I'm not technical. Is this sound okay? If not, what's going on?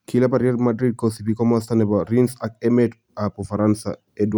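Yes, this sound is okay, and there's nothing going on that needs fixing.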